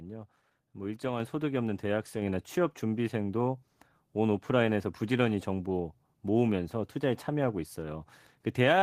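At 1.2 s and again at 2.22 s the microphone volume is stepped up: the input gain jumps by about 4 dB, then about 3 dB, lifting voice and background together. The waveform envelope widens abruptly at each point, and the spectrogram brightens evenly across all frequencies.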